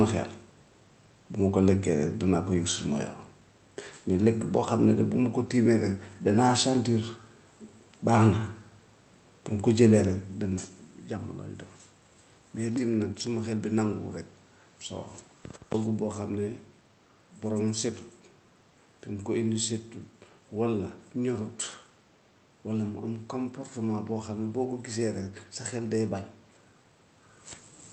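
No technical faults can be heard in this speech recording.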